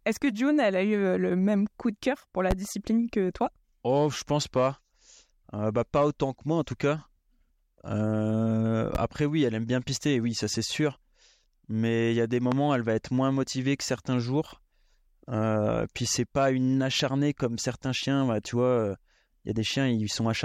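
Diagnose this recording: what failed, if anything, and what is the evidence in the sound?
Three loud pops sit on top of the speech, each a single sharp thump lasting about 30 ms. The first is at 2.51–2.54 s, right after "coup de cœur pour", and the second is at 8.95–8.98 s, just before "oui elle aime bien". The third comes at 12.52–12.55 s, between "il y a des" and "elle va être moins". They peak around 15, 10 and 15 dB above the speech, which carries on underneath each one. That points to the analogue wiring stage, likely a loose connector or static discharge putting a voltage spike into the line.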